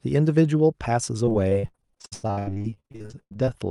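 From 1.25 s to 3.50 s the speech breaks up with repeated packet loss, giving that robotic sound. Around three dozen short holes land one after another, the longest about 95 ms. Each is papered over by stretching the last bit of audio, so nearly half that stretch is concealment rather than real signal. The result is choppy speech with chunks missing, all on top of the call path's roughly 12 kHz bandwidth.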